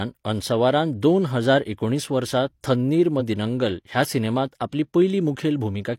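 A brief glitch breaks the speech from 3.16 to 3.22 s: damaged data in a compressed stream, where corrupted bytes made the decoder lose frame sync.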